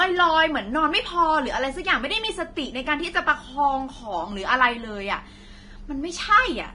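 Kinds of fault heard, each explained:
Vorbis compression: The speech sounds hissy and grainy throughout, with a gritty, roughened edge on voiced sounds, smeared consonant attacks, and nothing at all above 10.6 kHz. This is likely heavy Vorbis coding at a low rate, which fits somewhere near 30 kbps. The encoder cuts the top band away and quantises the remaining treble so coarsely that fine detail turns into noise of similar energy, leaving sizzle where clean high frequencies should be.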